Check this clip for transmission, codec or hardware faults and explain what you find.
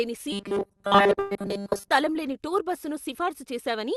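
The speech in this clip has three transmission faults, two of them overlapping in the first half.

From 0.32 to 1.91 s there is robotic sound from repeated short buffers: the speech turns into a rigid, metallic buzz at 200 Hz that loosely tracks the syllables. The likely cause is late-arriving audio being padded by replaying a tiny slice, which fits a 5 ms buffer, over most of this stretch while the real audio is skipped.

From 1.19 to 1.33 s, inside that robotic stretch, a burst of packet loss leaves a held, fading continuation of the preceding sound for about 114 ms. About 120 ms of audio went missing, and the receiver extended the last sound and faded it out. Playback then resumes further along.

From 2.13 to 2.17 s, short concealed packet loss produces a brief smear. About 20 ms never reached the decoder in time. The receiver filled the gap by extending what came before and then blended back into the real signal.

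The Opus call path cuts off the top end near 12 kHz.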